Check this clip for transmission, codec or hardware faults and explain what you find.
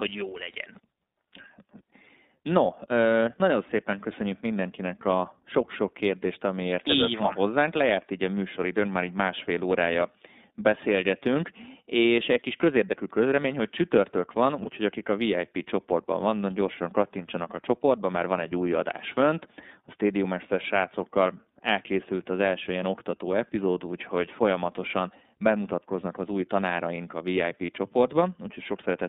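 Two faults are audible: iLBC coding throughout the speech and one brief dropout late in the clip.

iLBC codec, throughout. Speech is confined to about 200 Hz to 3.7 kHz. It sounds plainly rough and synthetic, which fits iLBC at 13.33 kbps with 30 ms frames.

Lost iLBC frames, 27.66 to 27.69 s, just after "az új tanáraink a". For 30 ms, consistent with a single lost frame, the decoder repeats the last pitch cycle with noise. This gives a short buzzy held vowel, and the speech recovers at once.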